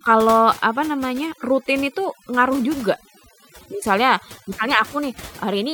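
Throughout the clip, overdone noise removal is at work: the reduction was set too aggressively, so frequency bands sitting near the noise estimate are pulled down or switched off along with quieter parts of the speech, leaving near-silent gaps with twinkling specks.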